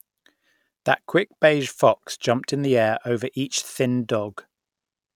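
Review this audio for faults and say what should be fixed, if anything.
Nothing in this speech recording needs fixing. No faults can be heard anywhere in it, so there is nothing to correct or prevent.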